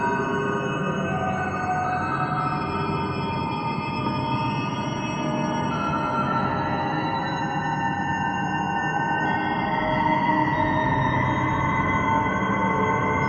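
At 4.06 s there is a skip ahead: about a third of a second of audio was discarded, likely by a jitter buffer shedding backlog, so playback jumps forward with no gap filled. The material on either side is spliced almost directly, leaving an abrupt discontinuity.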